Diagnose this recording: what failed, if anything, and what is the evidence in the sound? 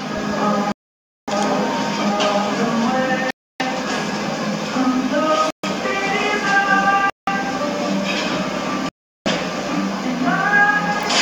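Bluetooth stall, five times: the sound drops to silence at 0.72 s for about 0.56 s, at 3.30 s for about 0.30 s, at 5.50 s for about 0.13 s, at 7.10 s for about 0.18 s, and at 8.89 s for about 0.37 s, each time resuming afterwards. The stage is the wireless playback link. The likely cause is radio interference delaying packets, so the receiver's buffer ran empty and output paused until retransmitted audio arrived.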